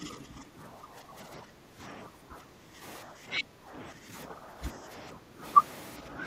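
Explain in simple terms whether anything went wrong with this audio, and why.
The speech keeps getting pushed down in level from 0.0 to 2.83 s, again from 3.03 to 5.43 s, and briefly from 6.01 to 6.22 s, where the dip is lighter. This is speech suppressed in double talk. The likely cause is someone on the far end talking at the same moment. The echo canceller couldn't tell this talker apart from the returning echo, so it turned both down.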